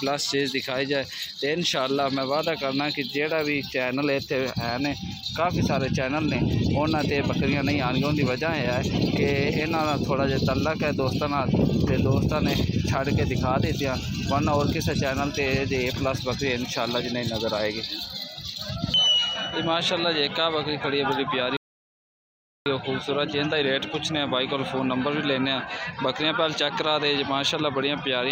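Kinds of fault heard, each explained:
Playback stall: At 21.57 s the sound cuts out mid-flow and the output falls completely silent for about 1.09 s, returning at 22.66 s. The gap is an abrupt stop and restart. The cause is likely the player running short of data or having its playback thread held up, leaving nothing to send to the output until it caught up.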